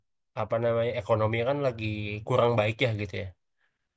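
From 1.75 s to the end, the resampler restarted on every block, converting 24 kHz down to 16 kHz in 50 ms chunks with no shared history. Each block edge picks up a small error, so the speech carries a steady 20 Hz tick, like a buzz.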